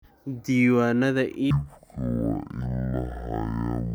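From 1.51 s to the end, the speech drops to half speed and an octave low. This is stereo read as mono. Left and right samples were played in sequence as one channel. Each stereo frame takes twice as long. A fainter mirrored copy appears in the upper spectrum.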